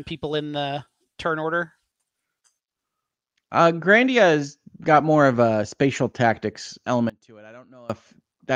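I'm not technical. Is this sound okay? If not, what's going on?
No, there's one problem near the end. From about 7.10 to 7.90 seconds the speech suddenly drops almost to nothing and then comes back. That kind of near-vanishing is what you get with one channel inverted. The likely cause is that one side of the stereo recording got flipped upside down, so when the two sides are combined they mostly cancel each other out and only a faint trace of the speech is left.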